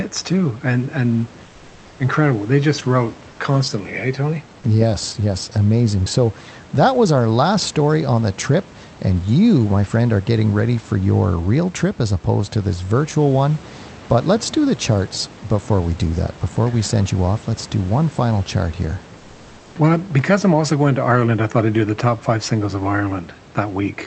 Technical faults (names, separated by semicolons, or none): comfort noise in place of the background